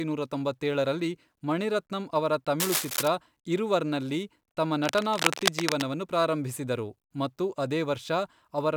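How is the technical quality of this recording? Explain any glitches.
The recording is marred by two bursts of cable scratch noise. The first runs from 2.60 to 3.08 s, after "ತೊಂಬತ್ತೇಳರಲ್ಲಿ ಮಣಿರತ್ನಂ ಅವರ", about as loud as the speech. The second runs from 4.84 to 5.86 s, after "ಇರುವರ್ನಲ್ಲಿ ತಮ್ಮ", slightly quieter. Both are dense, irregular scratching over the speech, likely a worn connector whose contact resistance fluctuated as it moved. The ragged, clustered texture distinguishes it from steady hiss or isolated clicks.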